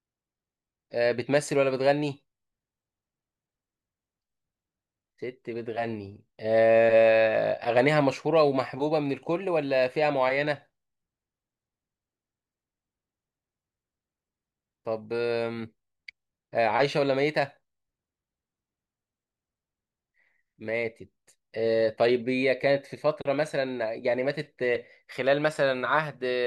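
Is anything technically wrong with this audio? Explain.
No, nothing technically wrong here.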